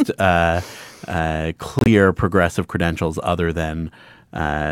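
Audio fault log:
1.79–1.87 s, corrupt frame muted: speech drops abruptly to silence for 84 ms, consistent with about three damaged compressed frames rejected and muted; timing holds.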